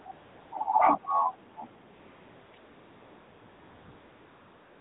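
Speech carried over an AMR narrowband mobile link, with AMR comfort noise at 0.00–0.06 s, 0.12–0.52 s, 1.94–2.54 s and 2.58–4.80 s. In each pause the real background is swapped for a steady, smooth synthetic hiss that switches in and out, rather than gated silence or genuine room sound.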